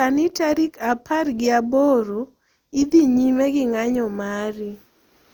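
Throughout the speech, the sound is swirly, smeared and hollow, with blurred attacks. This is generation loss, likely from about four passes through Opus at around 64 kbit/s.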